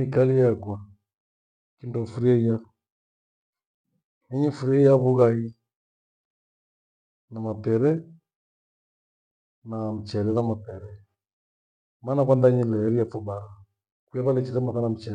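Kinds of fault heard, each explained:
No faults can be heard.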